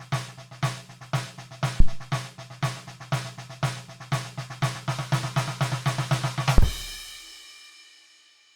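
Music, interrupted twice by a phantom power thump, at 1.80 to 1.95 s and 6.58 to 6.67 s. Each deep thump peaks near -4 dBFS and dies away within 34 ms and 19 ms. A supply switched on or off on a live input pushed its voltage step through the coupling capacitors.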